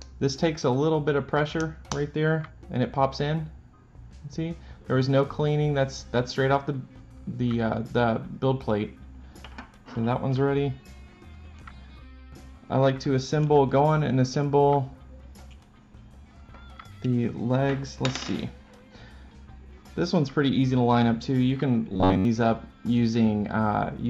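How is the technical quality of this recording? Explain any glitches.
One glitch stands out: from 21.90 to 22.25 s the sound collapses into robotic sound from repeated short buffers, a rigid metallic buzz near 93.8 Hz. This is likely caused by a chunk of about 11 ms being replayed over most of that stretch while the real audio is skipped. Unlike a steady mains hum, the buzz still loosely follows the shape of the sound beneath it.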